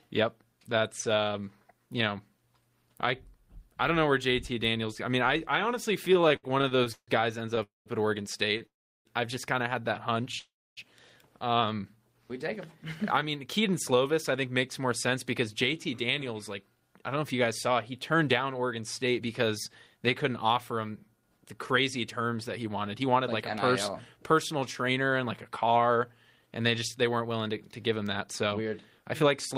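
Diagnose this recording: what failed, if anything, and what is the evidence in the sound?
The network and jitter buffer stage fails with repeated stalls (stutter) between 6.13 and 10.36 s. The sound hangs thirteen times, the longest gap about 153 ms, with roughly 401 ms of filled-in sound in total and nothing lost. Packets kept arriving later than they were due, so the buffer drained over and over. Each time the receiver extended the last sound until data returned, which makes the speech drag and stutter.

Three call audio freezes sit at the same network stage, at 7.63 to 7.89 s, 8.66 to 9.08 s and 10.39 to 10.80 s. They last about 225, 388 and 380 ms. In each, the last sound carries on briefly and then falls to silence for about 160, 340 and 270 ms, and the speech resumes where it stopped. The likely cause is packets held up in transit, so the playout delay grew by the full length of each pause.

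Two stretches of jitter buffer speed-up follow, from 12.85 to 19.21 s at 105% speed and from 22.58 to 29.55 s at 106%. The pitch is unchanged, but the speech sounds hurried, with roughly 0.4 s taken out of each stretch. After the earlier hold-ups the buffer was holding more audio than its target. The receiver trimmed many short pitch-period slices to bring the delay back down.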